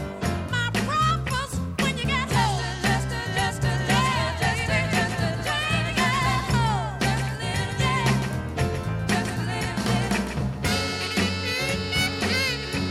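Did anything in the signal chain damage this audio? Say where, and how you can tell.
Yes, a doubled audio track runs from 3.69 to 10.71 s: a dry, roughly 10 dB quieter copy trails by about 150 ms, likely from a slower second capture path.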